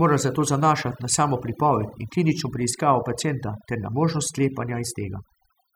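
From start to finish, the gaps between phrases drop to an unnatural near silence dotted with twinkling specks. This is overdone noise removal: a noise reduction process applied far too strongly to a noisy recording. It pushed individual frequency bands down or off wherever they sat close to its noise estimate, and the softer parts of the voice were stripped away along with the noise.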